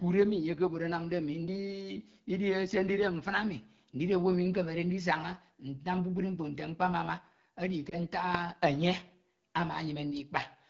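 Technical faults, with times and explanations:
Throughout: AMR wideband (HD Voice) codec. The speech has a rough, raspy grain and the top of the band sounds hissy rather than crisp. That points to AMR-WB running at one of its lowest modes, around 8.85 kbit/s, where the model of pulses driving a vocal tract filter has too few bits to capture detail below 6.4 kHz, and the band from 6.4 to 7 kHz is only shaped noise standing in for real content.
7.90 to 7.95 s: lost AMR speech frames. Just after "mkpo nte mkpamama edi" the sound briefly dips or warbles for a moment. A single speech frame of about 20 ms failed its checksum, so the decoder filled the gap by repeating the last good pitch and vocal tract settings at reduced gain. Because only one frame went missing, the result is a short wobble rather than a drawn-out fade to silence.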